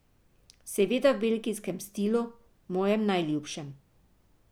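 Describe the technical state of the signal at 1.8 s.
At 1.8 s the speech signal is intact, with no audible technical fault at that moment.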